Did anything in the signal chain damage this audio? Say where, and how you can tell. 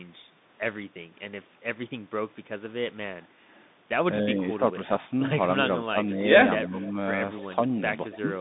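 Yes. At the codec stage, the whole speech clip has passed through a Bluetooth CVSD headset codec. The line band runs from 150 Hz to 3.7 kHz, and nothing above 3.8 kHz survives, so the speech sounds boxed-in and narrowband. Because CVSD sends one up-or-down bit per sample, which fits a 64 kbps link, loud bright sounds outrun the adapting step size. The result is plainly audible: sibilants turn scratchy and a grainy hiss sits under the speech.

In call processing, the background is gated by the echo canceller from 3.28 to 3.47 s. While the far end's loudspeaker signal was active, the canceller pulled the microphone path down hard, so the room sound dips by about 8 dB for roughly a fifth of a second and then recovers as the gate releases.

Speech suppressed in double talk shows up from 4.22 to 4.89 s, 5.93 to 5.97 s and 6.68 to 6.96 s. The level dips by about 5 dB, about 10 dB and about 5 dB respectively. 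The likely cause is both sides talking at once: the canceller cannot tell the near talker from the loudspeaker echo, so it attenuates everything, and the speech briefly sags or thins.

An echo leak appears from 6.62 to 6.91 s and from 8.11 to 8.2 s. A copy of the speech returns 275 ms late, about 10 dB below the main speech the first time and much fainter, around 20 dB down, the second time. The likely cause is a far-end speakerphone whose echo canceller left part of the microphone pickup uncancelled and sent it back down the line.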